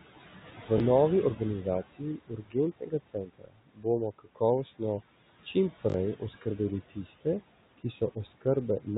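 Noise suppressor artifacts run through the whole recording. The suppressor pulls down bands it judges to be steady noise by about 16 dB, so the room noise, which sits about 18 dB below the speech, drops away in pauses and returns under each phrase. Everything sits in a narrow band with nothing above 4 kHz, which fits a G.711-type telephone codec on the call path.

At 0.78 to 0.80 s comes the first repeated buffer. A 20 ms block plays one extra time because fresh audio missed its deadline, costing about 20 ms of real signal. The hard join makes a brief stutter that is close to a click at this size.

From 1.36 to 3.86 s the suppressor cuts speech, mistaking parts of it for noise. Roughly a second of material within that span is pushed down, by up to about 19 dB at the deepest point. The affected speech sounds swallowed. Shorter cuts of the same kind follow at 4.19 to 4.81 s, touching about 150 ms of speech with drops of up to about 16 dB.

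At 5.90 to 5.94 s a second repeated buffer plays the same 20 ms block two extra times, losing about 40 ms. It is heard as a short double stutter.

The last speech cut by the noise suppressor falls at 7.78 to 8.46 s. Around 100 ms of speech dips by up to about 16 dB, leaving it faint.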